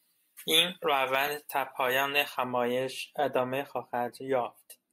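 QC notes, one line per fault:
0.00–2.44 s, pre-emphasis left on: the treble lift applied ahead of the transmission chain was never undone by the matching de-emphasis, so the top end is about 11 dB hotter at 10 kHz than at 1 kHz. The shape of the rise fits a J.17-type curve. With the highs standing that far above the midrange, the speech turns thin and glassy, and sibilants hiss forward and sound sharp and brittle until the tilt disappears at 2.44 s.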